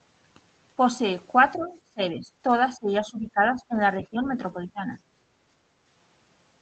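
Speech suppressed in double talk hits this speech recording three times, from 1.56 to 2.28 s, 2.76 to 3.8 s and 3.98 to 4.99 s, with the voice pulled down by around 20 dB in the first stretch, around 15 dB in the second and around 10 dB in the third. The likely cause is an echo canceller that heard the far side talking at the same moment, could not separate this talker from the loudspeaker echo, and attenuated everything. The other side's voice leaking through appears briefly, from 1.59 to 1.67 s, as a faint scrap of a second voice sitting far below the talker, roughly 25 dB down, right as the first suppression begins. That is likely far-end audio from the loudspeaker that the canceller failed to subtract from the microphone signal. Background gated by the echo canceller follows from 5.27 to 5.45 s, where the room tone drops by about 7 dB for a fifth of a second and then comes back. Here the canceller clamped the microphone while the loudspeaker was active and then let go. 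The Opus call path, running at about 24 kbps, caps the audio at 8 kHz.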